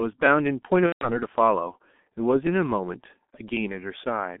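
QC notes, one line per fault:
Throughout, G.723.1 codec: the 6.3 kbit/s coder keeps only about 200 Hz to 3.6 kHz and models the voice coarsely, leaving speech muffled, hoarse and smeared.
0.26 to 3.57 s, clock drift buffer slips: a click recurs every 1.1 s, a few times, likely from a sample clock error of several hundred ppm, dropping or repeating short sample blocks.
0.86 to 1.10 s, VoIP packet loss concealed by the speech codec: about 150 ms of audio goes missing, fitting five 30 ms frames. The decoder extends the last sound into a fading buzzy tone or coloured noise, muted from the third lost frame, and speech stays weak or distorted afterwards.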